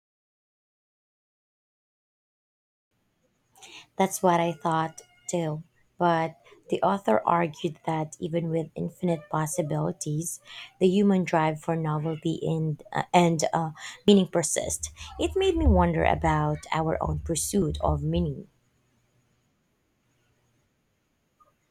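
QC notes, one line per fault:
14.08 s and 17.62 s, dropped buffer (overrun): each point has an abrupt jump in the speech and no gap of silence. The skip at 14.08 s is about 40 ms and the one at 17.62 s about half that. The likely cause is the recording software failing to collect its samples before the hardware overwrote them, so those stretches were lost and the audio on either side was joined directly.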